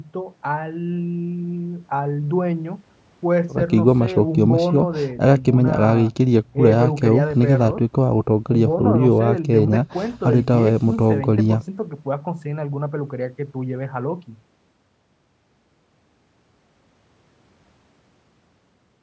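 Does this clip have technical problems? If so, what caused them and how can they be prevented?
No, this clip has no technical problems, so there is no cause to find and nothing to prevent.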